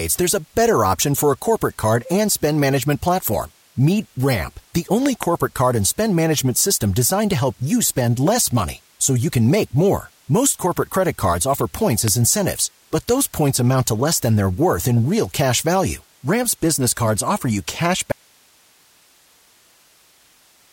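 A speech recording with loud pops: a pair between 5.06 and 5.25 s, just before "card and spend management", and a single one at 12.08 s, between "credit cards offer points" and "incentives but those points". Each peaks at something like 15 dB above the speech, which carries on underneath, unlike a dropout. They are likely voltage spikes from a switch, plug or static. At 18.12 s, right after "cards offer you cash", an audio dropout to a faint residue runs to the end. The speech cuts off abruptly rather than pausing or fading, leaving hiss roughly 35 dB down, likely from the signal being lost while the downstream path stayed live.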